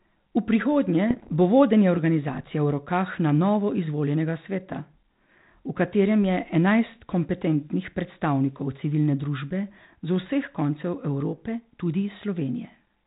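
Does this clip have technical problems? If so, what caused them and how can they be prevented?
Yes. Bit errors on an ADPCM link cause pops and rough bursts from 1.10 to 1.30 s. Each flipped bit throws off the decoder's step size and prediction, so the damage rings on briefly. An error rate under one percent fits what is heard. Better radio coverage or error protection on the link would prevent it.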